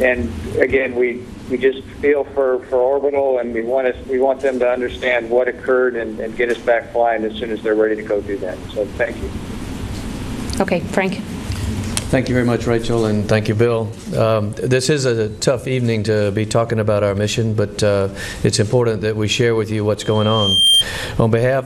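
From 20.00 to 20.85 s a loudspeaker feedback squeal rises at 3.2 kHz. The microphone is picking up its own loudspeaker, and the loop gain goes above one, so the tone grows over roughly 0.7 s to about 5 dB above the signal. A spectrogram shows one bright horizontal line, and the waveform envelope swells steadily.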